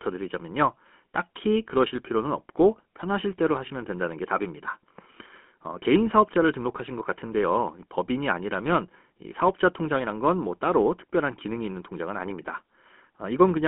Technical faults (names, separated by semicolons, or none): GSM full-rate codec